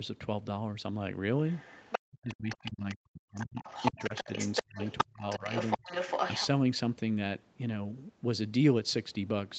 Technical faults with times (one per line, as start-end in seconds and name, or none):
1.49-2.95 other side's voice leaking through
2.07-4.29 speech suppressed in double talk
3.35-6.47 other side's voice leaking through
4.62-5.89 speech suppressed in double talk